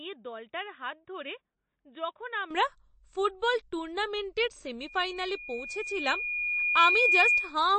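A poorer input device was likely in use for the opening of this speech recording. From 0.0 to 2.51 s nothing reaches above about 3.8 kHz, so the sound is dull and boxy, roughly 10 dB quieter, with a faint floor of new noise around 50 dB down. At 2.51 s the fuller device takes over with no gap, and the level and brightness jump up at once. Throughout the clip, MP3 compression has likely starved the encoder of bits. The damage plainly fits a low bitrate in the region of 34 kbps. The encoder has cut everything above about 8.4 kHz, which leaves the top end flat and airless. Weak frequency lines dropping in and out between frames give the speech a watery, swirling texture, with metallic chirps on s sounds and softened consonant attacks.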